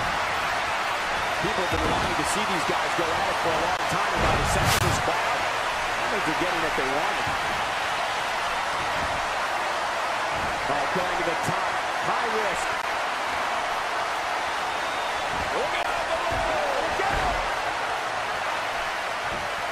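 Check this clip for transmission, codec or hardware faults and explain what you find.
There are gaps between stream segments at 1.77, 3.77, 4.79–4.81, 12.82 and 15.83 s, which fits one-second segments. Mistimed joins leave 8–20 ms holes of hard-edged silence.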